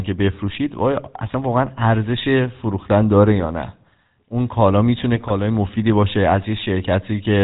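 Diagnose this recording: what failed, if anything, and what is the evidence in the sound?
The codec stage failed throughout: the speech carries the buzzy, gravelly roughness of the GSM full-rate codec, with nothing above 4 kHz. The codec rebuilds the voice from a vocal-tract filter driven by a sparse, regularly spaced pulse excitation, so the texture fits a 13 kbps full-rate coder. Plain band-limiting would sound dull and smooth. This roughness comes from the coarse excitation itself.

The network link also failed, with GSM bit errors from 3.39 to 3.47 s and again from 5.16 to 5.31 s, where the speech breaks into squawks and gargling pops. Corrupted filter, pitch or gain values make the decoder misbuild each affected frame. The bursts' lengths suggest roughly four and seven frames hit. Packet loss would leave gaps or smeared repeats, not these distorted, level-jumping outbursts.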